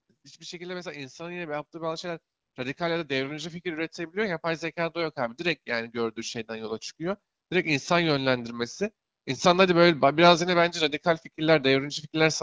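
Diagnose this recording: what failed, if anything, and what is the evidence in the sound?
The fault sits in the call processing chain: automatic gain rising. From 0.42 s the level climbs steadily until about 9.71 s, a total rise of about 15 dB. The speech and the background noise swell together, so the room gets louder along with the talker. That shared rise is the evidence. The AGC judged the input too quiet and kept raising its gain over roughly nine seconds, above the band-limited HD Voice sound of the call.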